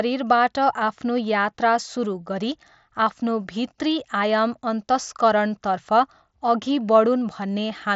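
Nothing's wrong with this speech clip; it's just come over a Bluetooth headset link on the mSBC codec, which is why there's nothing up above about 7.7 kHz.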